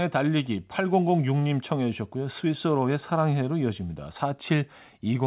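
Listening closely to the speech over the call connection, nothing stood out as a problem anywhere in the recording.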